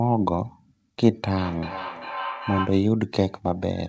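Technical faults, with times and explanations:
1.08–2.96 s: feedback howl. A microphone picks up a loudspeaker on the same call, and each trip around the loop adds level. The sound narrows to a tone around 1 kHz, with the loop repeating roughly every 0.4 s and peaking about 9 dB below the speech.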